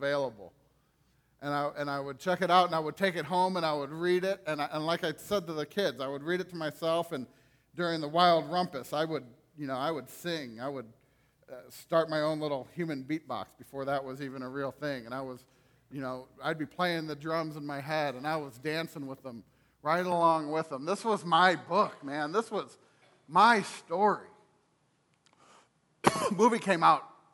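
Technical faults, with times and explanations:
20.12–27.33 s: input switched to a poorer device. Without any gap, the sound abruptly loses everything above 11.4 kHz, its level shifts by roughly 5 dB, and a faint new background noise appears. A narrower microphone likely took over. The simultaneous level and noise change rules out a simple filter.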